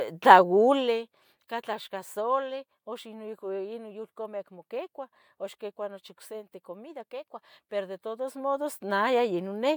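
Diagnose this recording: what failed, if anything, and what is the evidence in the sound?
Nothing stood out on listening to this speech recording that would point to a failure at any stage.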